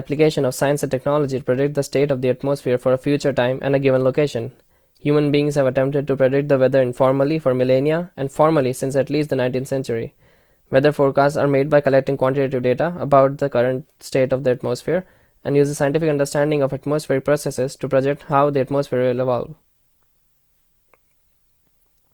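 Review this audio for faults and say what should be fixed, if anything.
The encoder was likely starved of bits: the roughness across the whole clip fits Opus compression in its music (CELT) mode at a low rate, around 24 kbps. Rather than leaving gaps, the codec keeps each band's energy and patches short bands with folded or noise-like content, so the speech turns grainy and rough instead of swirly. Bandwidth stays full, extending to about 20.1 kHz, but the damage is plainly audible. To prevent it, encode at a higher Opus bitrate or keep a less compressed master.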